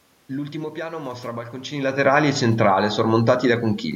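Nothing here points to a system fault: the background noise belongs to the room around the microphone, and the change in level at around a second and a half is just the talker shifting position relative to the mic.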